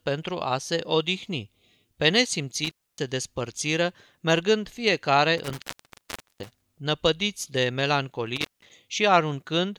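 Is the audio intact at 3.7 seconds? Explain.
Yes, the speech at 3.7 seconds is intact, with no fault at that point.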